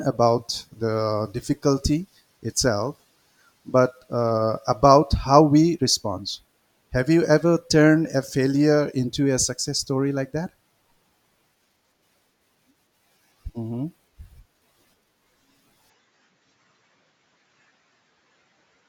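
At 15.9 s speech dulls, losing everything above 7.6 kHz, likely an input switched to a poorer device; the spectrogram shows a hard ceiling.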